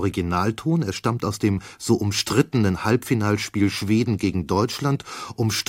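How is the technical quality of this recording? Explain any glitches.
One glitch stands out, a corrupt frame decoded, from 0.92 to 0.98 s, just before "aus dem so". Flipped bits in a few compressed frames were decoded anyway, so misread gains and codes put energy at wrong frequencies, peaking around -20 dBFS. It sounds like a brief chirpy burst. A lost frame would instead leave a gap or a smeared repeat.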